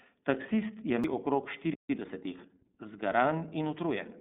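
Throughout, the speech passes through the iLBC codec. Its frame-by-frame coding, consistent with 30 ms frames near 13.3 kbps, leaves nothing above 3.8 kHz and makes the speech plainly rough and synthetic.

At 1.04 s, a CD skip makes the laser jump tracks. The output mutes very briefly, then resumes from a different point, heard as a tick and an abrupt jump.

From 1.74 to 1.90 s, a playback stall, likely from the player running out of data, silences the output for about 157 ms mid-flow.

From 1.90 to 2.52 s, the player works through its backlog with time-compressed catch-up, cutting and cross-fading small pieces. The speech runs 1.25 times faster at normal pitch.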